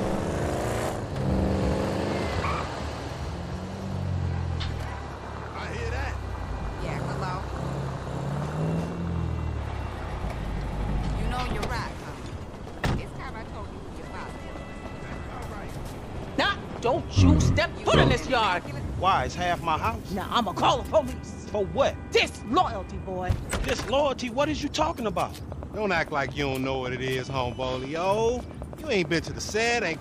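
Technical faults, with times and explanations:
25.52–29.94 s: train of clicks. A steady ticking of near-identical pulses runs over the sound at a regular 9.1 clicks per second, around forty in all, each peaking roughly 5 dB above the programme level, so they remain distinct even in quieter stretches. Such a uniform, evenly spaced pulse shape points to something outside the recorded sound, likely interference from nearby equipment or a faulty connection or power supply.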